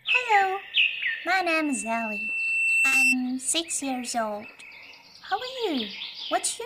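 The audio has a loudspeaker feedback squeal from 1.27 to 3.18 s: a microphone is picking up its own loudspeaker, and the loop gain at 2.7 kHz exceeds one. The tone swells over roughly one and a half seconds until it stands about 5 dB above the sound. On a spectrogram this shows as a single horizontal line at 2.7 kHz that brightens. Inside the squeal, at 2.87 to 2.94 s, there is a short concealed packet loss. About 40 ms of audio never arrived, and the receiver bridged the gap by extending the preceding sound, heard as a brief smear. On the spectrogram that stretch looks smoothed and repetitive, without the fine detail around it.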